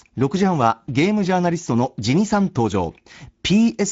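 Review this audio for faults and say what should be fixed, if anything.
Throughout the clip the speech passed through the Speex codec at a setting whose damage suggests roughly 17 kbps, starving the excitation of bits. The voice comes out noisy and hoarse, nothing remains above 7.7 kHz, and the top band is only a shaped, noise-like fill. To prevent this, send the speech at a higher Speex quality setting or through a more modern codec such as Opus.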